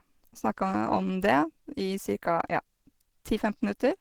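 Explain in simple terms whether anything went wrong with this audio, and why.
Across the whole clip, from start to finish, the speech sounds hoarse and muffled, with a rough, grainy texture clinging to it. This is most likely Opus compression, squeezed hard enough that the damage is plainly audible. To save space, the encoder has switched into its mixed speech mode, which rebuilds the sound from a simplified outline and patches the gaps with approximations. That leaves the speech coarse and husky.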